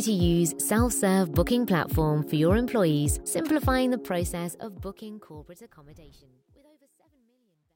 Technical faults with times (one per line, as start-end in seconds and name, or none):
3.85-7.75 truncation distortion on a fade